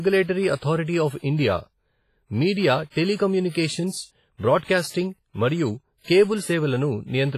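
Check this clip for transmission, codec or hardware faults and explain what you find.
The speech carries two related faults: heavy low-bitrate transform-codec damage throughout, and three pre-echo events.

WMA compression, likely the cause here, runs through the whole clip. The encoder appears starved of bits, consistent with a rate around 24 kbps, so it quantises each long block coarsely and discards weak spectral lines. The result sounds ringing and washy, with a hiss that rises and falls with the speech. Nothing reaches above 15.4 kHz, so the top end is missing.

Pre-echo appears at 3.50 s, 4.59 s and 4.90 s. In each case a sharp onset falls late in a transform block, and the noise sized for that loud attack is spread back across the quiet moment before it. A brief hiss therefore leads each attack, lasting about 53 ms at 3.50 s and about 40 ms at 4.59 s and 4.90 s. The onsets themselves sound softened and smeared rather than crisp.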